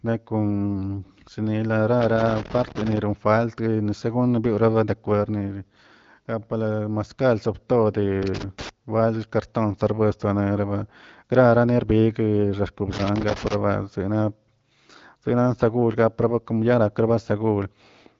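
Speech with loose connector crackle in three irregular bursts, from 2.01 to 2.98 s, 8.23 to 8.69 s and 12.93 to 13.54 s. A worn contact is making and breaking, chopping the signal into scratchy crackle. Unlike steady digital clicks or dropouts, the bursts are uneven in spacing and texture. The band stops near 7.5 kHz with light wideband-codec character, consistent with AMR-WB at a mid rate such as 15.85 kbit/s.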